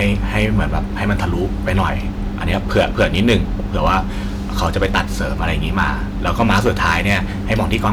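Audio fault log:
Throughout, hard clipping. The speech is driven about 10 dB past what the stage can pass, so the highest peaks are sliced flat. Only around one percent of samples hit the ceiling. The flat tops add high harmonics, heard as crackle on loud syllables.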